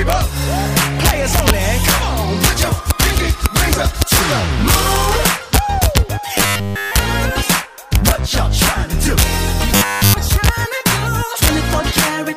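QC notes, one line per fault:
Throughout: integer overflow. The level runs about 3 dB past full scale, so only the loudest peaks, around half a percent of samples, exceed the integer limit. Those samples wrap to the opposite extreme instead of being held, and each one becomes a sharp, violent crack on loud moments. Clipping flattens a peak into a dull, fuzzy distortion. Overflow throws the waveform across the whole range, so the cracks are far harsher and more abrupt.
6.38–6.98 s and 9.76–10.16 s: robotic sound from repeated short buffers. In both stretches the sound turns into a rigid, metallic buzz fixed at 100 Hz, and it loosely follows the original contour. The steady 100 Hz tone fits a 10 ms chunk being replayed in a loop, likely because fresh audio arrived too late. Most of the first stretch is repeated material, and all of the second is. Dropouts fall silent and stutter repeats longer fragments, but this fault imposes a constant pitch.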